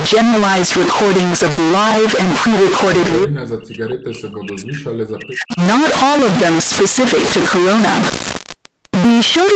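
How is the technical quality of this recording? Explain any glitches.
The speech has three clear technical problems: constant distortion, a short dropout early on, and a long stretch where the talker is pushed down.

Stuck bit, throughout: The sound has a distortion from start to finish, and the pauses are filled with a gritty noise floor instead of falling silent. This likely comes from one data bit stuck at a fixed value. About half of the samples are then off by that bit's weight, in a pattern that follows the waveform. Near zero the bit flips with the sign of small values, so quiet gaps turn into noise.

Burst of packet loss, 1.51 to 1.60 s: For about 60 ms the receiver keeps repeating the last sound and fades it, which gives a held buzz or a fading hiss where fresh audio should be. The speech then picks up again about 40 ms further on, so that stretch is simply gone. Playback also shifts by roughly 20 ms as the receiver adjusts its timing after the gap.

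Speech suppressed in double talk, 3.2 to 5.61 s: Across this span the talker dips, for about two seconds in total. At the deepest point the level falls by around 40 dB. The likely cause is an echo canceller that could not tell the local talker from loudspeaker echo while the other side was speaking, so it turned both down. The call's microphone processing, with nothing above 8 kHz, is normal and not part of these faults.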